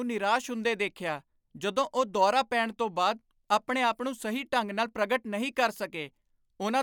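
No technical faults are audible anywhere in the speech recording.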